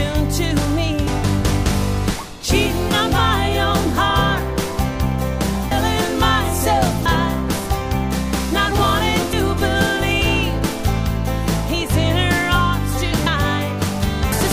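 At 1.07, 5.71, 7.06, 9.33, 13.26 and 14.32 s the audio suddenly jumps forward. That's compressed frames skipped: whole chunks of the coded stream never reached the output, so the decoder carried on from a later frame, in steps that fit roughly 32 ms frames. The gaps run to around a sixth of a second at 1.07, 7.06 and 13.26 s, a fifth at 9.33 s, nearer a third at 5.71 s and half a second at 14.32 s.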